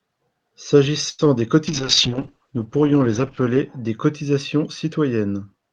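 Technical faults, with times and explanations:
1.09–1.21 s: short stall from a late packet. A packet arrived late, the jitter buffer emptied, and the last sound was stretched for about 92 ms before playback resumed, with nothing skipped. On a spectrogram the harmonics run flat and unchanging across the gap, and the waveform shows a held, repeating cycle.
1.25 s: short concealed packet loss. About 20 ms of audio never reached the decoder, and the receiver filled the gap by extending the preceding sound before blending back, so a brief smear or wobble is heard. The spectrogram shows a brief blurred patch where the detail thins, with a small seam in the waveform.
1.69–3.77 s: call bitrate drop. The encoder fell from 48 kbps to 9 kbps and held the lowest rate for about 1.9 s, coding more coarsely and cutting the band from 20 kHz to 8 kHz. The speech turns muffled and watery. On a spectrogram, energy stops abruptly at a flat ceiling near 8 kHz, with smeared, blocky texture below.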